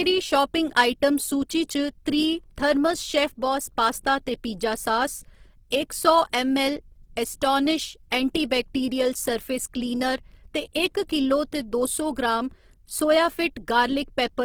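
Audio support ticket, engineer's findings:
Grainy, rough, noise-filled texture on the speech across entire clip; little swirling, bands stay filled, content up to 20.2 kHz. Likely Opus compression in CELT music mode: detail replaced by folded or noise fill, consistent with 16 kbps.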